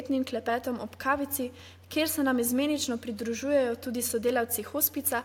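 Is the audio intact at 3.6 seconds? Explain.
Yes, the audio is intact at 3.6 seconds, with only the room's own background noise sitting about 38 dB below the speech.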